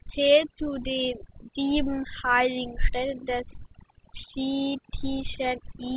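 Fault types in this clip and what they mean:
overdone noise removal: A noise suppressor set far too aggressively runs through the whole speech clip, pulling individual frequency bands down or out whenever they sit close to its noise estimate, and softer parts of the voice vanish along with the noise. The pauses drop to near silence scattered with twinkling, chirpy specks. That flickering, band-by-band gating marks it apart from a plain low-pass or bandwidth limit, which dulls evenly without any twinkle.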